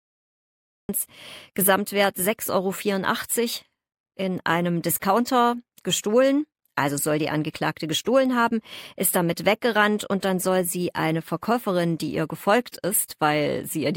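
The clip opens with digital silence until 0.89 s. Then speech appears abruptly, already mid-sound. This is a cut-off start. Capture began late, so the opening of the utterance was never recorded. There is no natural attack or fade-in.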